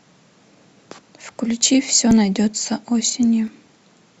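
Three jumps break up the speech at 1.29 s, 2.11 s and 3.48 s, each with the sound jumping abruptly forward instead of pausing. The likely cause is a dropped buffer (overrun): roughly 20 ms, then about 10 ms twice, went missing and the remaining audio was spliced together.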